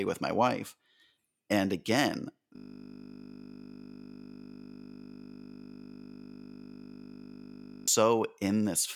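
From 2.56 s to 7.88 s the speech gives way to a system hang loop. The driver froze while the hardware replayed a 20 ms buffer, producing a steady 50 Hz buzz.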